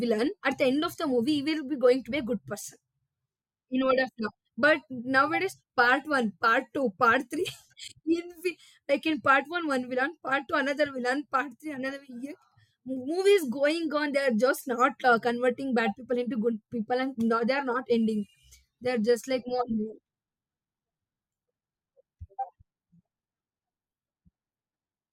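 No technical faults can be heard anywhere in the speech. Nothing in the audio calls for a timestamp or further comment.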